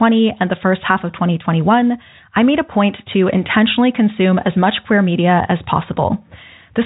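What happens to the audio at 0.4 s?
Nothing goes wrong at 0.4 s: the speech there is intact and carries through in its narrow telephone band without any break or distortion.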